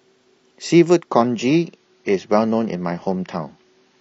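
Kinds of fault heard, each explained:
Adaptive stream at a lower bitrate: from about 1.11 s to the end, the speech suddenly degrades as coding artefacts rise. The player has likely switched to a cheaper version of the stream after the connection slowed, and the drop sounds like a move from roughly 96 kbit/s AAC to around 24 kbit/s. Unlike a rebuffering stall, there is no gap or pause, only an abrupt change in quality.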